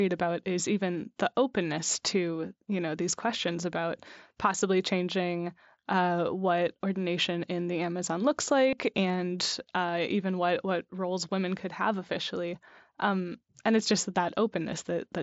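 At about 8.70 s, just before "and uh even what", there's a brief run of concealed Bluetooth headset packet loss lasting 30 ms, which fits a few consecutive lost packets. The receiver papered over the gap by repeating the best-matching recent stretch of waveform from the wideband mSBC headset link, so you get a short buzzy, held tone and a slight warble as the real speech comes back.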